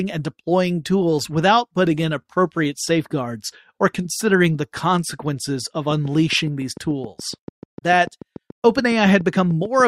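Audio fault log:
5.91 s to the end: train of clicks. A steady tick sets in and keeps going until the clip stops, about seven clicks a second, evenly spaced and all much the same shape. They poke out a few dB above the speech and carry on through the gaps too, so they sound laid over the recording rather than part of it. A regular pulse like that is most likely interference from nearby equipment or a faulty connection or power supply.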